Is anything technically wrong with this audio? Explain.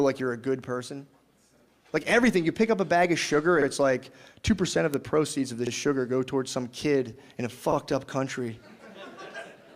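Yes. Two faults recur.

Overlapping chunks occur at 1.57, 3.62, 5.67 and 7.72 s. The audio was cut into 2-second chunks, and each one starts 50 ms before the previous one ends. That 50 ms plays twice at every join. The result is a regular stutter or click every two seconds.

Bit error spikes occur at 3.81 and 4.94 s. Each is a single flipped bit in one sample. The value jumps by a power of two and snaps back at once. Each is heard as a sharp, broadband tick unrelated to the surrounding sound.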